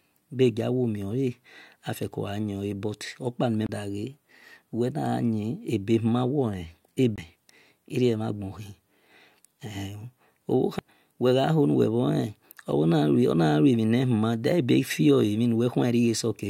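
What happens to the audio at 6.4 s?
Nothing goes wrong at 6.4 s; the audio is intact through that moment with no dropout, click, distortion or other fault.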